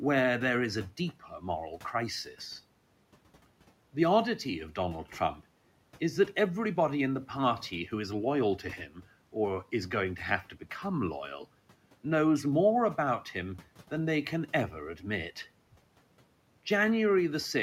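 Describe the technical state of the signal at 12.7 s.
At 12.7 s the speech signal is intact, with only the room's background noise sitting about 25 dB below the speech.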